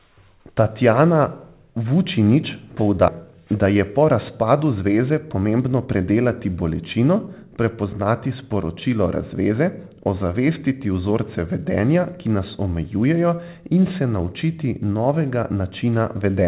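Skip ahead, at 3.08 to 3.10 s: about 0.4 s of speech never reaches the listener. The stream was cut while later audio was already queued, so playback lands directly on that later material with no pause or filler. The two sides are butted together, so speech lurches forward mid-flow and about 0.4 s of it is lost. Both sides carry the narrowband, 4 kHz-limited sound of the G.711 A-law call path.

Jitter buffer speed-up, from 3.31 to 6.05 s, ending just before "bolečino prepoznati sporočilo": the receiver held more audio than it wanted and worked the backlog down by repeatedly removing tiny slices one or a few pitch periods long. Over this stretch, roughly 200 ms in total disappears, and speech runs at about 108% of normal speed. The pitch stays the same, but the delivery sounds slightly rushed and compressed until normal pacing returns.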